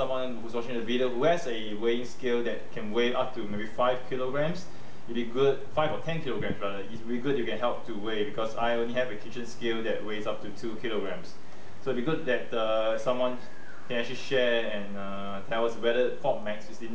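Nothing in this one stands out as a technical fault; it just rolls along without any glitch worth pointing to.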